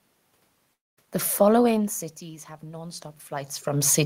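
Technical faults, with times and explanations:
0.73–0.99 s, long network dropout: About 240 ms of sound goes missing, likely because packets stopped arriving. The receiver stretches the last sound into a brief fading buzz, then falls to near silence before the audio resumes further on, with the lost stretch never played.
2.60–4.06 s, automatic gain rising: Just after "following cities have", the input level falls by about 18 dB. The gain control hears the input as too quiet and slowly raises its gain, so the voice and the background noise swell together over the final second and a half.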